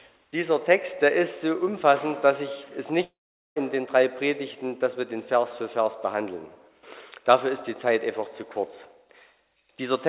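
From 3.04 to 3.58 s the audio gives way to a fading buzz, then about 0.43 s of silence, resuming with a chunk missing, likely a long network dropout. The sound is band-limited at 4 kHz, as expected from a G.711 call path.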